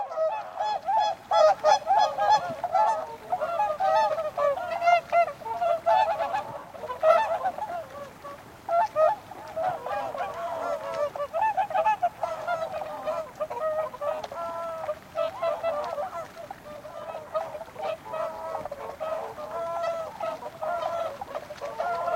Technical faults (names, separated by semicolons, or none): none